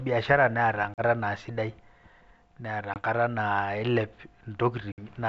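Packet loss on an ADPCM call drops speech at 0.94 s (about 40 ms, roughly two packets, before "naa sidai"), 2.94 s (about 20 ms) and 4.92 s (about 60 ms). Each hard silent gap is followed by briefly distorted speech as the decoder's predictor and step size resynchronise.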